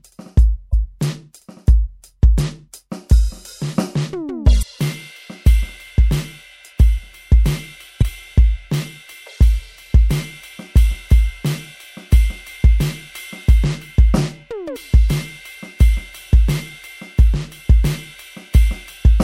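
In this music, four short bursts of damaged data in a compressed stream hit at 0.70–0.74, 4.59–4.63, 7.98–8.03 and 14.72–14.77 s. Each time, the decoder chews on corrupted frames, loses sync and hunts for the next header, leaving a brief glitch about 40 ms long.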